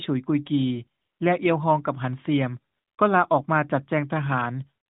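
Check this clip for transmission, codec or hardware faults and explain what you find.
AMR comfort noise appears three times in this speech, carried over a narrowband AMR link whose light coding damage fits a 12.2 kbps mode. At 1.02 to 1.20 s, 2.74 to 2.98 s, and from 4.86 s to the end, the sender judged the talker silent and stopped sending speech frames. The receiver substituted smooth synthetic noise, so the real background switches out for a steady hiss.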